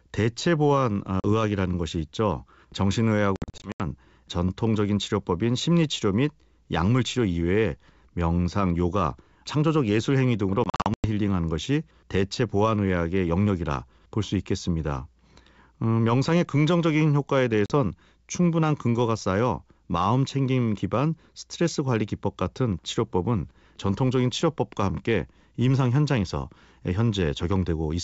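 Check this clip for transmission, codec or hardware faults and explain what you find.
Packet loss on an ADPCM call occurs four times, over the clip's wideband G.722 coding at 64 kbit/s. Packet loss on an ADPCM call at 1.20–1.25 s, 3.36–3.83 s, 10.64–11.06 s and 17.66–17.72 s: lost packets become silent gaps, and the decoder's predictor and step size drift from the sender's. The sound cuts out abruptly, then returns briefly slightly distorted. The middle two events scatter roughly 250 ms of gaps across about 0.4 s, the longest lasting 80 and 100 ms.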